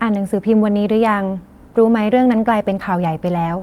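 At 1.67 to 1.69 s the speech skips ahead. Roughly 0.7 s of audio is missing. It was dropped on the way or thrown out when the jitter buffer overflowed while later audio was already waiting. Nothing fills the cut. The two sides are joined almost directly, so the talk jumps forward abruptly with no pause. The listening delay falls by about the same amount.

From 2.26 to 2.79 s a jitter buffer speed-up follows. The buffer was holding more audio than its target, so the receiver trimmed short pieces of one or a few pitch periods, many times in a row. Around 70 ms is removed in total. The speech plays about 10 percent fast at unchanged pitch and sounds hurried through this stretch.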